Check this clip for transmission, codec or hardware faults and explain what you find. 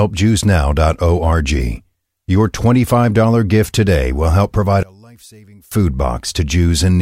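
One fault stands out. From 4.83 to 5.72 s the speech collapses to a faint trace, about 28 dB down, then returns. The likely cause is one channel inverted: with one stereo side's polarity reversed, the shared centre content cancels when summed to mono.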